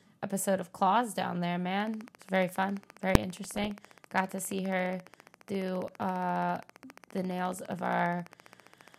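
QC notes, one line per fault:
1.80–8.95 s, train of clicks: starting just after "down there", about a hundred evenly spaced ticks at 14.7 per second, peaking near programme level; likely external interference.
3.15 s, invalid numbers at full scale: a single hard bang lasting 1.45 ms, the output pinned at one extreme value, which fits a 64-sample processing block.
3.45–3.70 s, DAB burbling: short blips of noise in single sub-bands, consistent with around a dozen MP2 frames corrupted at roughly half a percent bit errors.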